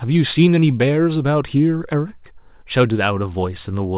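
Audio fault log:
Nothing to log here; the speech comes over a regular call path, which for G.711 A-law at 64 kbps means nothing above 4 kHz, and that's just how this kind of line sounds.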